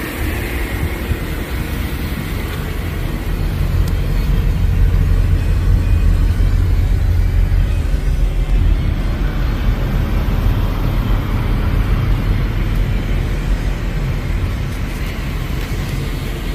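At 1.00, 3.09, 7.01, 8.50, 10.80 and 15.63 s the sound jumps ahead, each time skipping roughly 20 ms with no silence. The likely cause is a dropped buffer (overrun): samples were overwritten before being read, leaving the surrounding audio spliced together.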